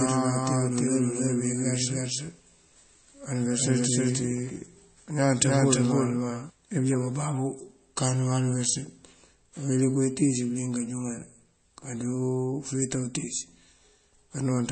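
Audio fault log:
throughout  MP3 compression: the audio was likely squeezed through an MP3 encoder starved of bits, with the heavy damage pointing to a rate near 32 kbps. To save bits the encoder discards everything above 8.4 kHz, so the speech sounds dull and boxed in, and it drops weak frequency lines that flicker in and out between frames. That flicker gives the voice a watery, swirling texture, with chirpy metallic edges on sibilants and softened, smeared consonant attacks.
0.0–6.5 s  doubled audio track: a second copy of the speech, likely from a slower capture path or a misaligned edit, is mixed in at roughly the same level as the original and trails it by about a third of a second. The copy is already running when the clip opens. Because it is full-band and carries no decay or room colour, it sounds like a distinct overlapping repeat rather than an echo. At 6.5 s it cuts off abruptly, leaving a single voice.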